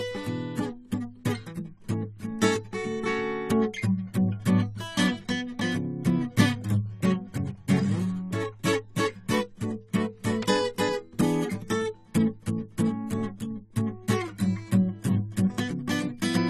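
From start to end, the music has nothing above 14.1 kHz and sustained tones warble and fizz, likely AAC compression. A plain low-pass filter would dull it without that warble.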